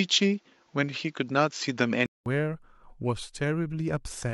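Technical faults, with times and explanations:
0.00–2.26 s, input switched to a poorer device: the speech sounds dull and boxy, with nothing above 7.6 kHz, a faint added background noise roughly 45 dB below the speech, and a level about 5 dB off from what follows. At 2.26 s a 200 ms silence gives way to clearer, fuller sound. The likely cause is the recording starting on a narrower-band microphone before the system changed to the better input.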